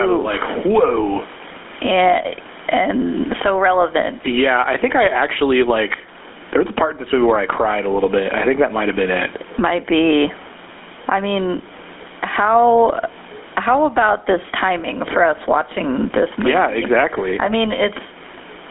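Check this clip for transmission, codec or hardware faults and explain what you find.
Two faults run through the whole speech clip.

Gain pumping, throughout: the gain swings by roughly 20 dB, pulled down on loud speech, likely from excess microphone gain feeding a fast limiter. The waveform looks flattened, with a raised floor between phrases.

GSM full-rate codec, throughout: the speech sounds buzzy and gravelly, confined to about 250 Hz to 3.5 kHz. This fits 13 kbps pulse-excited coding, and a spectrogram shows nothing above 3.8 kHz.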